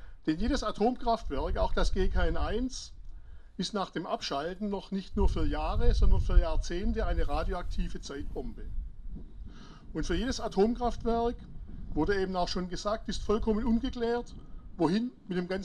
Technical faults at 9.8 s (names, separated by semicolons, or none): none